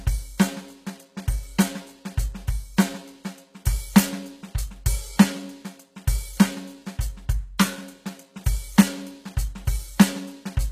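Throughout the music, treble above the crossover sounds plainly synthetic and stops at 14.9 kHz, likely HE-AAC compression rebuilding it from copied lower bands, fitting roughly 20 kbps.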